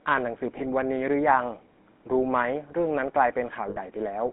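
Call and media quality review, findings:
GSM full-rate codec, whole clip: buzzy, gravelly speech band-limited to roughly 200 Hz to 3.6 kHz. Sparse pulse excitation through a vocal-tract model fits 13 kbps GSM.

Lost GSM frames at 0.58 to 0.61 s and 3.70 to 3.79 s: brief metallic ringing hold. The decoder repeats the last good frame, which fits one 20 ms frame, then about three.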